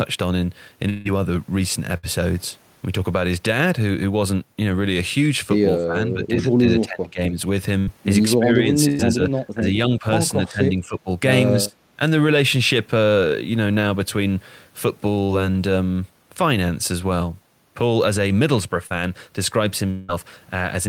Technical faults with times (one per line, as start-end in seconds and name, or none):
0.89-1.07 long network dropout
1.97-2.05 burst of packet loss
5.78-7.38 speech suppressed in double talk
7.79-7.89 burst of packet loss
8.39-10.05 speech suppressed in double talk
8.89-9.01 burst of packet loss
10.43-11.09 speech suppressed in double talk
11.65-12.00 speech suppressed in double talk
15.25-15.31 short concealed packet loss
18.87-18.92 short concealed packet loss
19.90-20.10 long network dropout